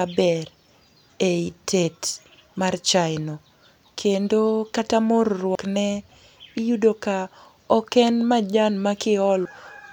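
At 5.55 s and again at 9.45 s the speech lurches forward, with compressed frames skipped. Each time, about a tenth of a second of audio simply never plays. The jump sounds like a single lost frame of around 92.9 ms, dropped because it was missing or the decoder rejected it as damaged. You hear a join where the speech hops ahead.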